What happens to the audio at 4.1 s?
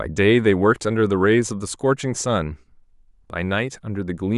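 Nothing goes wrong at 4.1 s; the speech continues intact through that moment.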